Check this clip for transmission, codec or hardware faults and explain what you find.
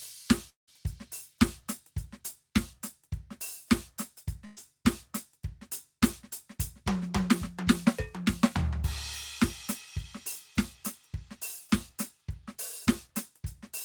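Two transmission faults stand out in the music, both at the receiving end.

At 0.49 to 0.69 s, the music stops and the last sound is held and fades away. For about 0.12 s of that stretch there is only silence. About 180 ms of music never returns. The passage resumes later, with that part gone. This is likely a long network dropout. The receiver ran out of incoming audio and stretched the final sound until nothing was left to play.

At 4.45 to 4.59 s, there is a burst of packet loss. About 120 ms of music is missing. The receiver fills the hole by continuing the last sound and turning it down. The fill never drops to silence, so the gap sounds like a brief smeared, fading tone. Then the music jumps ahead with the lost part skipped.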